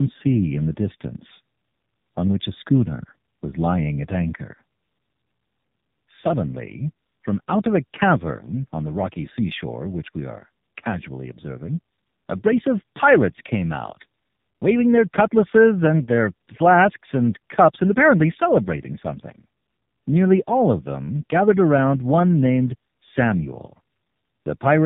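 Tandem speech coding runs throughout: the speech sounds coded twice in succession by a narrowband mobile-style codec, likely with an ordinary telephone link between. The second coder works on the first's damage, so the speech is rough, warbly and muffled, with nothing above 3.7 kHz.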